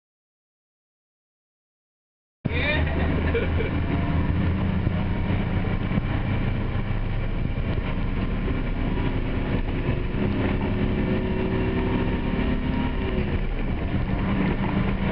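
The audio input was most likely lost at the source, perhaps a disconnected device, a failed link or a stray mute, while the recorder kept writing silence. That produces an audio dropout to silence already under way when the clip opens: from 0 to 2.44 s there is nothing at all, not even room tone, and the sound then enters abruptly mid-flow. Whatever happened during those first seconds is gone.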